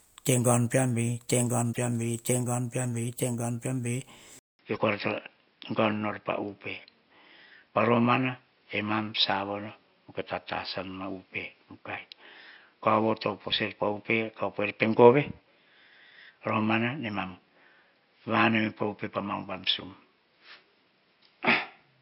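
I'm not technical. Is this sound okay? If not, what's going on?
No. At 1.69 to 1.78 s and again at 4.74 to 4.79 s there are brief glitches caused by damaged data in a compressed stream. Part of the stored audio was corrupted, so the player garbled those moments.

From 4.39 s to the end, after a silence of about 0.2 s, the sound turns dull and boxy, with nothing above about 5.4 kHz and new background noise. The likely cause is the input switched to a poorer device, such as a lower-quality microphone or headset.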